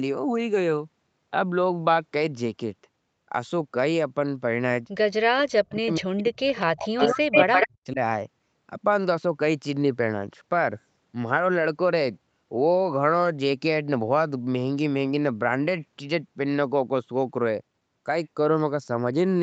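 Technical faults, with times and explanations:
5.25 to 7.99 s, speech suppressed in double talk: The voice dips and cuts out in pieces, falling by roughly 40 dB at its deepest. About two seconds of this stretch is affected in total. The pattern points to the other side talking at the same moment. The echo canceller likely could not tell this talker from the loudspeaker echo. So it turned both down, and the voice drops away in chunks.
7.0 to 7.68 s, echo leak: A delayed copy of the voice comes back about 134 ms behind the original. It sits at roughly the same level as the speech, so it is plainly audible, not faint. This fits a far end playing the call on a loudspeaker. Its echo canceller likely failed to remove what its microphone picked up, and the leftover was sent back. It overlaps the suppressed stretch above.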